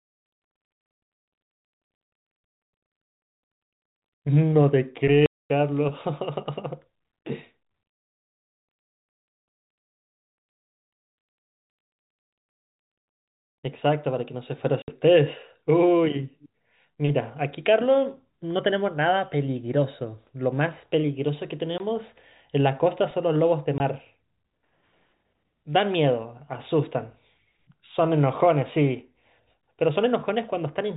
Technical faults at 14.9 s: packet loss filled with silence

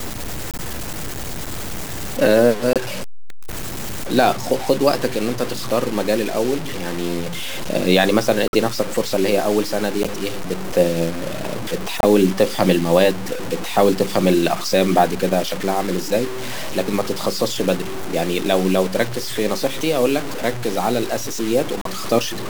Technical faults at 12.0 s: low bit depth without dither; corrupt frame decoded

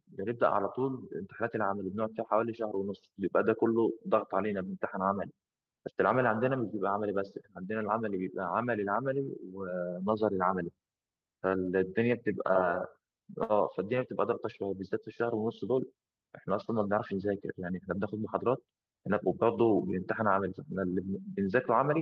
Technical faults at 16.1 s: jitter buffer speed-up

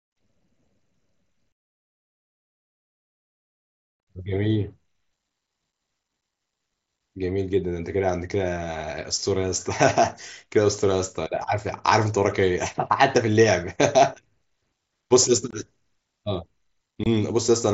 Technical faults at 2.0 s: none

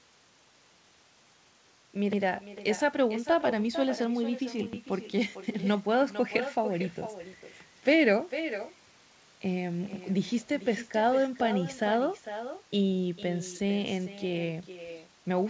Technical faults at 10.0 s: echo with no canceller; overlapping chunks

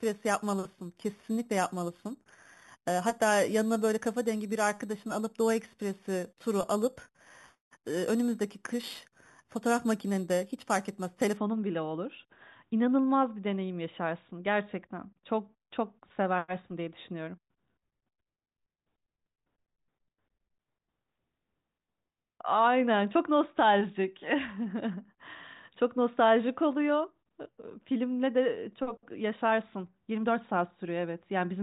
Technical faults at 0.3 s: imaging from sample-and-hold upsampling

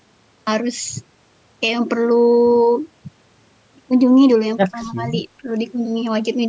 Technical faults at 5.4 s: speech suppressed in double talk

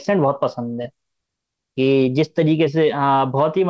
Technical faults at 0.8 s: short stall from a late packet; short concealed packet loss

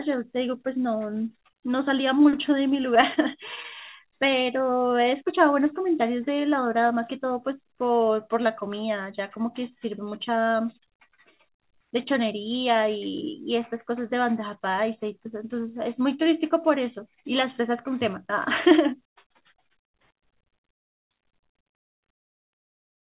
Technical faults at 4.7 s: jitter buffer slow-down

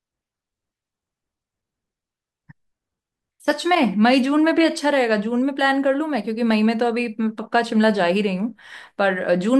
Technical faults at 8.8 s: none

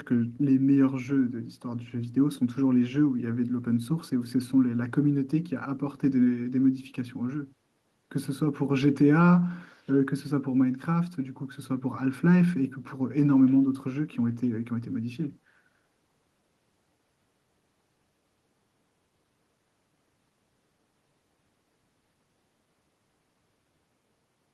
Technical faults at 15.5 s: none

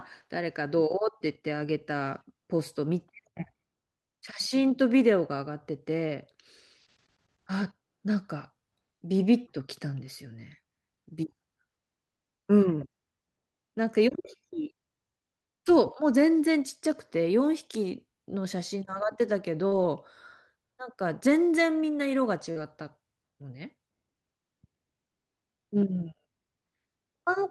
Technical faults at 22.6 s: short concealed packet loss; lost packet rebuilt from error correction

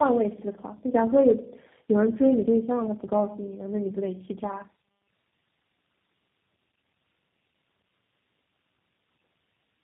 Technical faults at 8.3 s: tandem speech coding

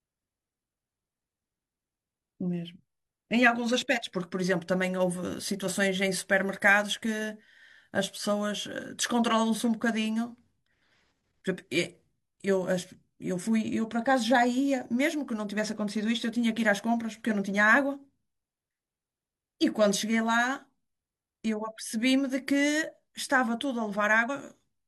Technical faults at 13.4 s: compressed frames skipped

